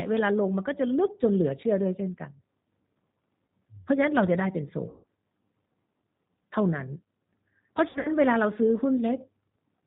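From the start, the speech carries plainly audible G.729 codec damage: at 8 kbit/s the voice is rebuilt from a filter, pitch predictor and sparse pulses, so it sounds rough and synthetic. A spectrogram shows nothing above 4 kHz and smeared, pulse-like harmonics.

At 4.90 to 5.05 s, VoIP packet loss concealed by the speech codec stretches about 140 ms of audio into a fading, drawn-out sound, which fits roughly seven lost packets. Around 7.89 to 8.09 s, 120 ms of scattered losses, the longest run 60 ms, cause shorter dips. On a spectrogram these appear as stretched, repeated patterns, and the waveform shows a decaying envelope.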